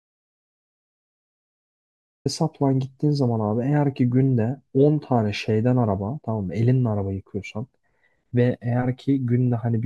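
The input feed was most likely lost before the recording began, through a disconnected device, a failed link or a mute, while the recorder kept writing silence, so this speech clip opens with an audio dropout to silence already under way. From 0.0 s to about 2.26 s there is dead digital silence with no room tone at all, and the speech then arrives abruptly mid-flow, with whatever came before that point simply gone.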